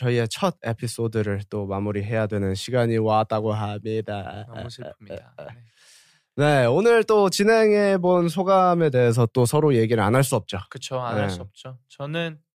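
Listening through the recording of speech, nothing stood out as a technical problem at any point.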